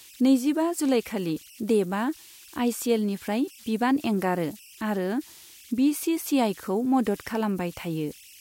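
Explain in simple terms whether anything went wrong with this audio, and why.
The converter that turned this speech into digital form was producing converter idle tones. With no added dither, it slips into repeating patterns whenever the incoming sound is very quiet, and those patterns create a tone of their own. Throughout the recording, that shows up as a high whistle somewhere around 3 kHz, clearest in the pauses between phrases. Under softer passages of speech, it turns into a grainy hiss.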